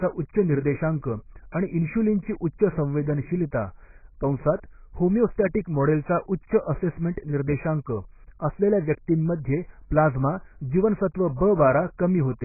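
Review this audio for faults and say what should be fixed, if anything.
Throughout the speech nothing survives above 2.5 kHz, and sibilants warble and fizz. This is heavy AAC compression, likely at a bitrate around 12 kbps, discarding bands the encoder cannot afford. A spectrogram shows a flat ceiling at 2.5 kHz with patchy holes beneath. Encode at a higher bitrate.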